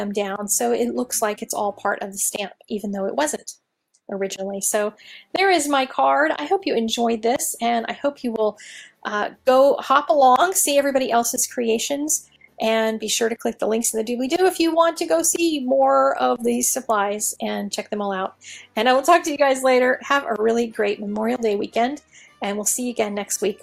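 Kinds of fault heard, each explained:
No technical faults can be heard anywhere in this recording.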